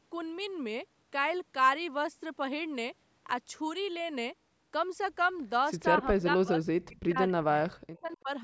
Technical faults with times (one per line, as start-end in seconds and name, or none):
6.00-8.30 speech suppressed in double talk
6.83-6.87 echo leak
7.97-8.17 echo leak